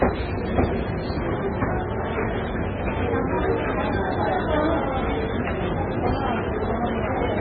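From start to finish the sound is heavily damaged by what is most likely MP3 compression at a very low bitrate, around 16 kbps. Nothing survives above 4.7 kHz, so the audio is dull and boxy, and the remaining content swirls and warbles as weak frequency lines drop in and out between frames. On a spectrogram this shows as a hard horizontal ceiling at 4.7 kHz and speckled, flickering patches below it. Transients in the waveform look smeared rather than crisp.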